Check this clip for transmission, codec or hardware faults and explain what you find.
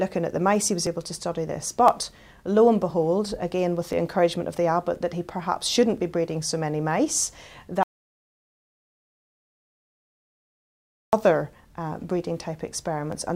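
Two faults are audible: a regular ticking from short skipped dropouts across most of the clip, and one long gap of total silence.

Periodic USB or driver dropouts run from 0.87 s to 13.12 s, repeating every 1.02 s for about fifteen events. At that fixed interval something stalls the USB transfer or audio driver, and a few milliseconds of samples, around 4 ms, are skipped outright rather than padded. The join where the samples close up makes a tick or pop, but only while sound is present.

Audio dropout to silence occurs from 7.83 s to 11.13 s, a gap of 3.3 s. The sound cuts off abruptly and the stream carries silence, with no room tone underneath, before resuming mid-flow. The likely cause is the input being lost through a disconnection, failed link or accidental mute while recording continued writing silence. Whatever occurred during those seconds is gone.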